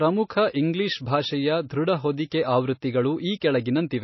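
A short speech recording carries audible MP3 compression damage from start to finish. Nothing sounds above 5.8 kHz, so sibilants are dull and clipped, and the remaining band has a watery, swirling texture as weak frequency components drop in and out between frames. The likely cause is heavy lossy encoding at a bitrate in the region of 24 kbps. On a spectrogram this appears as a hard horizontal ceiling at 5.8 kHz with patchy, speckled holes in the upper bands. At 3.40 s there is pre-echo: a hiss of about 15 ms arrives just ahead of a sharp onset, which makes the attack sound smeared. The transform codec spread its coding noise across the whole block, so noise meant for the loud onset also fills the quiet moment before it. A waveform shows a thin fuzzy smear leading into the attack, and a spectrogram shows a broadband vertical haze about 15 milliseconds wide just before the transient.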